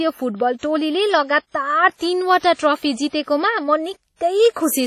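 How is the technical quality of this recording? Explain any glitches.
The recording is marred by heavy lossy-codec damage throughout. The sound rings and smears, with a hiss that swells and fades alongside the speech, and nothing is present above 16.5 kHz. This is likely WMA compression at a low bitrate, around 32 kbps. The encoder's long transform blocks spread quantisation noise over tens of milliseconds around each sound, and weak spectral lines are discarded, leaving a washy, watery texture.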